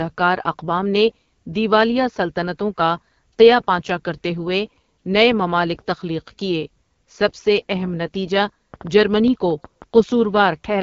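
Throughout, the speech sounds rough and raspy, with a buzzy, papery edge and nothing above about 7.1 kHz. This is the AMR wideband (HD Voice) codec at 8.85 kbit/s, one of its lowest rates, where the vocal tract model and sparse pulse excitation can no longer capture the voice cleanly.

From 8.37 to 9.99 s, just after "کیے سب سے اہم", a train of clicks ticks over the speech: about ten sharp, similar pops at roughly 5 per second, irregularly spaced and about 5 dB above the speech. The likely cause is interference or a faulty connection injecting repeated pulses.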